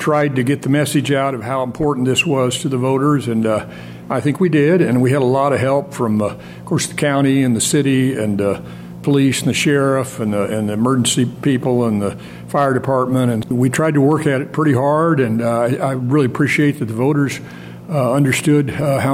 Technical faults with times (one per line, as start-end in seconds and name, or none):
none